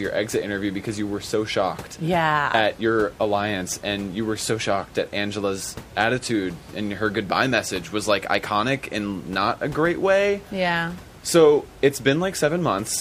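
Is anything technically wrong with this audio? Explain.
No, nothing technically wrong can be heard in this speech recording. The room's background noise sits about 21 dB below the speech, and it belongs to the recording space rather than to the system.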